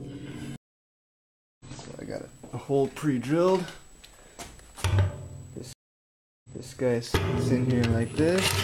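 At 0.56 s the sound drops out for about 1.04 s and returns roughly half a second further on; at 5.73 s a 0.71 s gap ends by replaying 0.28 s already heard. Both are stream reconnects, where a broken connection restarts the decoder mid-stream.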